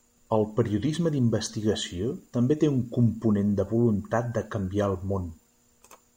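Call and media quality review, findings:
No faults heard in this speech.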